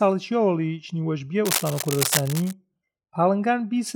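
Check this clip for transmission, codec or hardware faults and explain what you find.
One hardware fault appears: from 1.45 to 2.53 s, cable scratch noise sits roughly 5 dB below the speech, heard as scratchy rustling, likely from a worn connector shifting contact. A spectrogram shows dense broadband speckle; the waveform shows ragged spikes.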